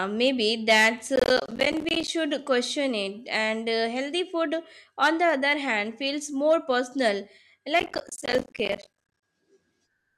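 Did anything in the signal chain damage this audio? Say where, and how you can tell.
Yes. Processor overload crackle appears from 1.16 to 2.08 s and again from 7.80 to 9.23 s, damaging the speech at the driver and buffer stage. The processor repeatedly missed its deadlines for buffers of around 10 ms, and each missed buffer was replaced with silence. Dozens of these hard-edged gaps in quick succession produce the gritty, tearing crackle over the voice, which stops cleanly once the load eases.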